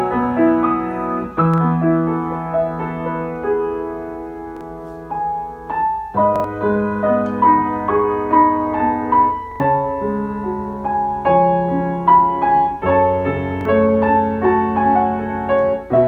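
Fresh audio repeatedly missed its deadline, so the device replayed its last buffer, a repeated buffer fault. Each 43 ms slice, which fits a 2048-sample buffer, sounds again with a hard join, a brief stutter at 1.54, 4.57, 6.36, 9.52 and 13.61 s, played three times at 6.36 and 9.52 s.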